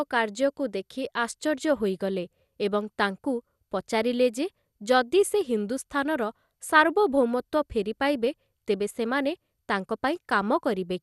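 MP2 compression runs through the whole speech clip, from start to finish. Nothing is heard above 12.2 kHz, and the speech sounds dull, with a gurgling, granular roughness that is plainly audible. This is likely MPEG Layer II coding at a starved rate, which fits roughly 80 kbps: too few bits go to its 32 sub-bands, so upper bands drop out and flicker while the remaining ones are coarsely quantised.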